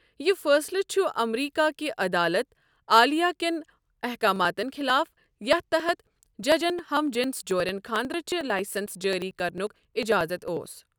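Periodic USB or driver dropouts run from 4.27 s to 10.93 s: roughly every 0.09 s, a stall in the bus or driver skips about 10 ms of speech outright. Around seventy gaps produce a steady train of ticks, audible only while speech continues.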